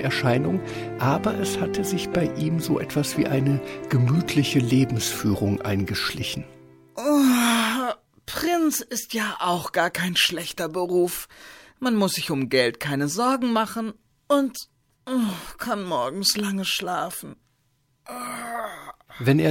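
Nothing in the sound gives any sign of a technical fault, so there's really nothing to flag here.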